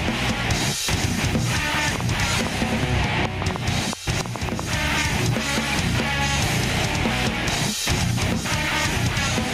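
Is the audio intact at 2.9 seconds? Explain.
No. At 2.9 s you're in the middle of a train of clicks running from about 1.96 to 4.60 s: roughly four to five similar pops a second at an uneven pace, standing well above the sound, likely interference or a faulty connection injecting pulses.

There's also gain pumping at that moment, as everywhere in the clip. The level swings by around 10 dB, which squashes the sound. The likely cause is input gain set far too high, with a fast limiter clamping down.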